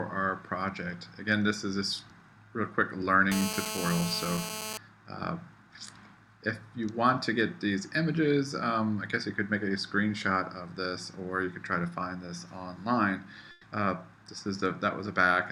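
From 3.32 to 4.78 s there is GSM phone buzz: a nearby 2G handset in a call, bursting about 217 times a second, has its radio pulses rectified in the audio circuit. The result is a nearly steady, raspy 217 Hz buzz rich in harmonics, sitting about 5 dB below the signal.

At 13.51 s a burst of packet loss leaves a 120 ms gap, ending at 13.65 s. The receiver fills it by extending the last sound while fading it down. Playback then resumes 120 ms further on, so that stretch of audio is missing.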